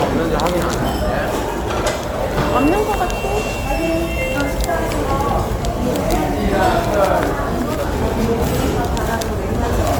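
Throughout, the sound carries generation loss, likely from about four MP3 passes near 95 kbit/s, leaving a swirly, hollow smear and softened attacks.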